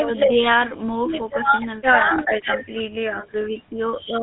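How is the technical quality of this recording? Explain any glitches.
The speech is degraded by GSM full-rate codec damage, plainly audible throughout. The codec rebuilds the voice from a vocal-tract model excited by sparse regular pulses, giving a buzzy, gravelly roughness and nothing above 4 kHz, which fits 13 kbps full-rate GSM.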